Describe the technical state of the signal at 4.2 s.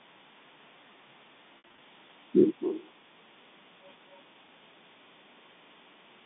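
A faint, delayed copy of the speech surfaces briefly from 4.1 to 4.23 s, trailing the original by about 267 ms and sitting very low beneath it. This is an echo leak, likely from a far-end loudspeaker whose echo canceller let some residual pickup return down the line.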